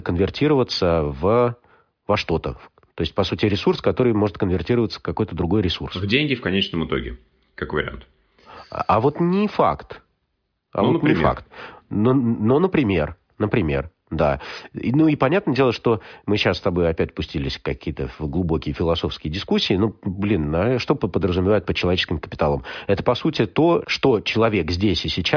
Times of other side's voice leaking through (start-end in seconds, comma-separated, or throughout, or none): none